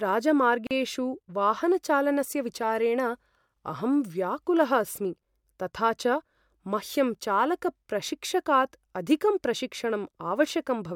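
Two separately encoded pieces of the speech were joined without trimming the encoder's start delay and end padding, leaving a gap at a join of encoded pieces. From 0.67 to 0.71 s, a 40 ms silence cuts in with smeared edges, then the speech picks up where it stopped.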